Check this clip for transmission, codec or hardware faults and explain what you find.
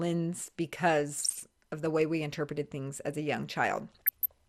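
Two faults stand out: a dull, gurgling codec sound across the whole clip, and two short bursts of burbling damage.

Throughout, the speech sounds muffled, with a granular, gurgling edge. This is MP2 compression, likely at a rate around 80 kbps: too few bits leave the upper sub-bands switched off or flickering, and the bands that remain are coarsely quantised.

From 1.16 to 1.42 s, and again from 3.92 to 4.27 s, the sound breaks into short blips of noise. This is DAB burbling: bit errors at a fraction of a percent slip past error correction, so corrupted samples put short noise blips into single sub-bands, and corrupted scale factors make sub-bands jump in level for up to a frame.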